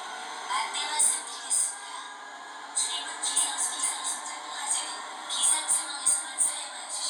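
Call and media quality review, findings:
Doubled audio track, 2.87 to 4.89 s. Full-band copy trails by about half a second, roughly 5 dB down. No decay, no room colour. Starts and stops abruptly. Likely a slower second capture path or an edit stacking two out-of-step copies.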